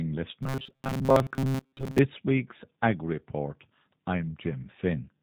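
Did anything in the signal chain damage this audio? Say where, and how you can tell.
Yes. At the codec stage, the whole clip carries G.729 damage: nothing passes above 4 kHz, and the speech sounds plainly rough and synthetic at 8 kbit/s. Unlike a simple low-pass filter, it has a frame-by-frame, rebuilt quality from the model-based coding.

From 0.43 to 2.00 s the speech turns into robotic sound from repeated short buffers, a rigid metallic buzz at 133 Hz, which points to a segment of about 7.5 ms being replayed, likely from a driver or buffer underrun. Most of the audio there is repeated rather than new. Codec roughness never imposes a fixed pitch like this.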